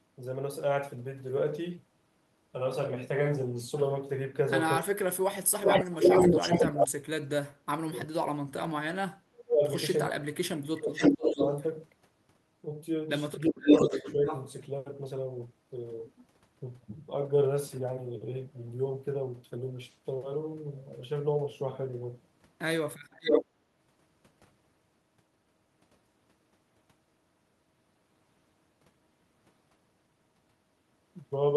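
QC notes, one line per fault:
4.79–8.34 s, 9.05–9.65 s, 10.08–11.4 s and 13.46–14.25 s, speech suppressed in double talk: the speech keeps sinking or breaking up in chunks, dropping by around 40 dB at its worst (closer to 25 dB in the last run). Likely the far end was talking at the same moment, so the echo canceller couldn't tell this voice from its own loudspeaker echo and ducked everything. It's a few seconds of lost speech in total.
5.64–6.86 s, 10.93–11.64 s, 13.67–14.45 s and 23.11–23.45 s, echo leak: a delayed copy of the speech comes back, trailing by 365 ms in the first stretch and 475 ms in the others. It sits roughly 5 dB above the speech. Likely a speakerphone on the other side whose canceller let part of what its mic heard slip back down the line. Note how the first three overlap the suppressed patches.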